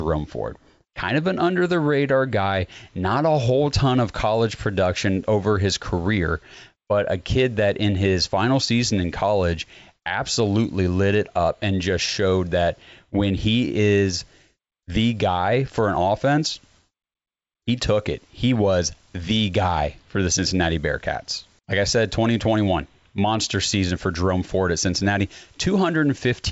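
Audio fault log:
Nothing to log here: the speech comes across with no faults to note, and the G.722 wideband telephone coding it passes through is working as it should.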